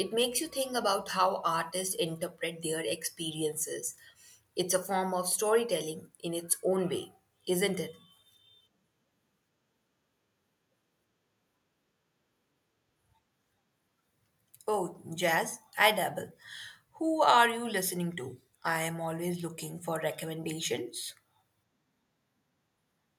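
No technical fault can be heard anywhere in the speech recording. Nothing in it calls for a time mark or a note on what went wrong.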